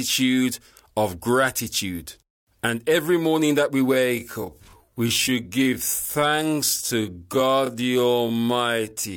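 From 3.89 s, right after "every morning that we", the speech drops to roughly 0.58 times its pace and stays that way to the end at 9.17 s, a time-stretched section. The pitch doesn't budge, but the delivery suddenly drags, as short slices of the sound get repeated to fill the extra time. It's likely software stretching that stretch of audio to fit a longer slot.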